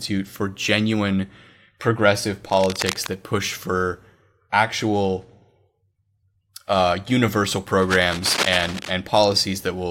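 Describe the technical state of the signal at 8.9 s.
Cable scratch noise covers this moment, running from 7.82 to 8.94 s after "uh universal". It is likely a worn cable or connector shifting and scraping, and appears as dense, ragged broadband bursts roughly 10 dB below the speech.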